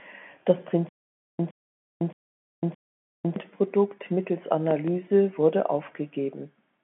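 From 0.89 to 3.36 s a stutter with silent gaps repeats the same 114 ms fragment four times, each followed by 505 ms of dead silence, a 619 ms cycle. On a waveform, identical blocks alternate with flat silent stretches. This likely comes from a stalled stream replaying its last buffer, and the missing audio is lost.

Between 4.71 and 4.91 s, two loud pops land on top of the sound, peaking roughly 10 dB above it. They appear as tall spikes on the waveform and thin vertical stripes across the telephone-band spectrogram. A likely cause is an electrical transient or driver glitch.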